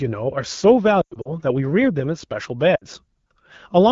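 Lost AMR speech frames first hit between 1.01 and 1.31 s. Corrupted frames are replaced by the decoder's reuse of the last good pitch and vocal tract settings at falling gain, so the speech smears, warbles and, in the longest 100 ms run, fades quickly toward silence before returning rough. A spectrogram shows harmonics frozen into flat horizontal bands that dim. The waveform envelope sags. A shorter 60 ms dip recurs at 2.75 to 2.85 s, over the lightly coloured wideband speech.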